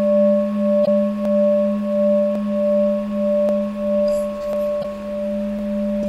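Two short glitches break the audio, from 0.82 to 0.88 s and from 4.80 to 4.85 s. Each lasts about 56 ms. They come from damaged data in a compressed stream. Some frames reach the decoder corrupted. It cannot decode them cleanly and loses its place. It then hunts for the next valid frame header. The garbled output is heard as a brief glitch.

Five single sharp clicks fall at 1.25, 2.35, 3.49, 4.53 and 5.59 s. Each is a thin, instant tick. The likely cause is dropped samples. A tiny stretch of the signal, well under a millisecond, goes missing each time. The waveform leaps straight to a later value. That sudden step makes the click. Nothing audible is lost, since the gap is so short.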